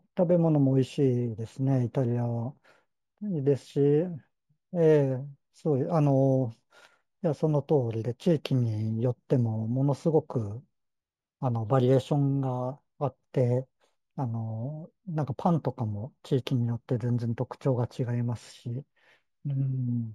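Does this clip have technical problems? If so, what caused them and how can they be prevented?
Yes. Imaging from linear upsampling runs through the whole clip. The sound points to audio at 16 kHz raised to 44.1 kHz by drawing straight lines between samples, a weak low-pass filter. The top of the original band is dulled, and a faint mirror copy of the spectrum appears between 8 kHz and 16 kHz, roughly 45 dB below the speech, heard as a light metallic shimmer on sibilants. To prevent it, resample with a proper band-limited (windowed-sinc or polyphase) filter instead of linear interpolation.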